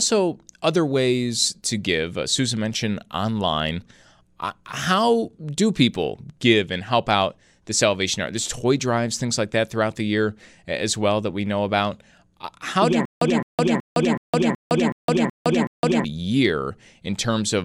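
At 13.05 s, right after "how do yeah", the speech breaks into a stutter with silent gaps that runs to 16.04 s. A 213 ms fragment plays eight times, each followed by about 161 ms of digital silence, repeating every 374 ms. The likely cause is a stalled player or stream replaying its last buffer at each retry. Whatever should have sounded there is lost. On a waveform, identical blocks alternate with flat silent stretches; a spectrogram shows matching columns separated by blank gaps.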